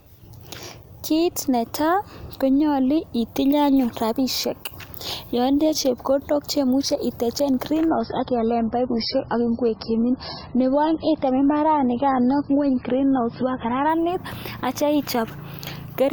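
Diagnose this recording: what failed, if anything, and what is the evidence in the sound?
The network is the culprit here: from 7.89 s to 13.89 s the speech suddenly goes dull and a bit swirly, with nothing above about 5.6 kHz, then snaps back just as abruptly. There's no gap at either edge. That's an adaptive stream at a lower bitrate. The connection slowed, the player switched to a cheaper encode for six seconds, and the bandwidth and artefacts fit MP3 dropping from around 128 to roughly 18 kbit/s.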